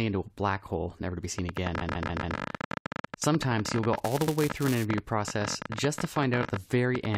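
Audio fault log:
1.39–7.16 s, train of clicks: Just after "hole never to be", a ticking starts and runs to the end: about 16 clicks per second at an uneven pace, roughly seventy in all, with peaks about 15 dB above the sound. Each click is a similar short pulse, so the cause is likely outside interference or a struggling interface. On a spectrogram they are thin full-height vertical lines at irregular spacing. In the waveform they are sharp spikes standing above the signal.
1.80–2.36 s and 4.26–4.33 s, repeated frames: In the first stutter, a 139.3 ms block plays four extra times, which adds 557.3 ms. In the second, a 69.7 ms block plays once more, which adds 69.7 ms. The decoder received the same run of compressed frames more than once, so that stretch of sound comes back verbatim and the clip is longer. In the waveform, identical segments sit side by side. A spectrogram shows the same pattern copied across, with any mismatch at a join appearing as a vertical seam.
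3.95–4.85 s, buffer tearing: A robotic buzz at 345 Hz sits on the sound, which fits a 128-sample buffer. The writer and reader of the ring buffer cross inside each period, so a small slice of every buffer, roughly 2%, holds audio from about 5 ms earlier, with hard joins on both sides. On a spectrogram this appears as stripes at 345 Hz intervals. The waveform shows small breaks repeating at that rate.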